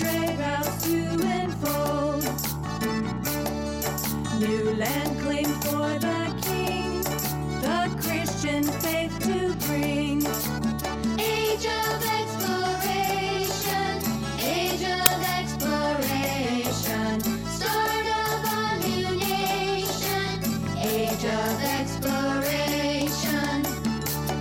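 At 15.06 s a very short burst of very loud white noise cuts in, harsh static with hard edges that starts and stops abruptly. This is file tags played as audio. Part of the file's metadata, here an embedded cover picture, was handed to the decoder as if it were sound. Because the image data is compressed, its bytes look random when read as samples, so they come out as very loud noise instead of silence.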